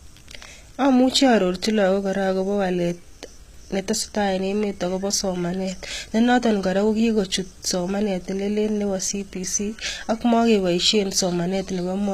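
Throughout the speech, s sounds are gritty and lispy over treble that stops dead at 14.9 kHz. The likely cause is HE-AAC compression at a rate fitting about 20 kbps. Unlike a plain low-pass, the treble is present but rebuilt from copied lower bands, so its harmonics misalign.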